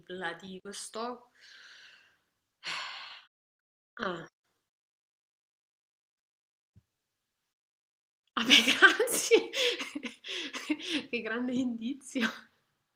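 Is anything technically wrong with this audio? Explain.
No, the signal carries through without any audible technical fault.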